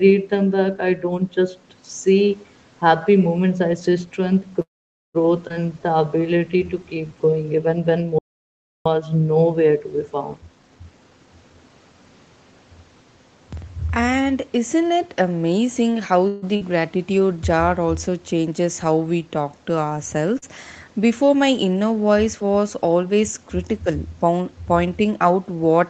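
At 4.61 s the speech stops in a call audio freeze that lasts until 5.17 s. The last sound trails off briefly, then about half a second of silence follows. The likely cause is delayed packets draining the jitter buffer. Speech resumes where it stopped.

At 5.49 to 5.52 s there is a skip ahead. About a fifth of a second of speech is dropped. The two sides are joined almost directly, with only a tiny gap.

From 5.66 to 7.18 s a jitter buffer slow-down follows. The receiver repeats short pitch periods to rebuild its reserve. Speech plays at 87 percent speed, with 204 ms added. The pitch stays the same. Sounds are drawn out.

From 8.19 to 8.86 s comes an audio dropout to silence. For 669 ms there is silence with no room tone. The speech cuts off and comes back mid-flow. The likely cause is a lost input or link. That speech is gone.

From 10.36 to 11.65 s there is a jitter buffer speed-up. The receiver cuts pitch periods to reduce excess delay. 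Speech runs at 140 percent speed, and roughly half a second is removed. The pitch holds steady. It sounds hurried.

At 16.28 to 16.44 s a second, shorter call audio freeze fills 144 ms. The last sound is stretched over the gap with no silence. Again, the likely cause is late packets. Nothing is lost. The speech simply pauses and continues.

Two short concealed packet losses occur, at 16.56 to 16.62 s and at 20.38 to 20.44 s. Each time 40 ms never arrived. The decoder extends the previous sound and blends back in. Each one is heard as a brief smear or wobble.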